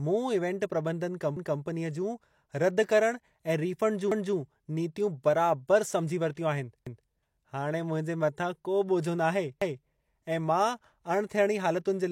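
At 6.35 to 6.37 s, just before "आहिनि हाणे", there's pre-echo: the codec's block put noise meant for the loud onset into the quiet gap ahead of it, so a brief hiss of about 23 ms leads in and the attack sounds smeared.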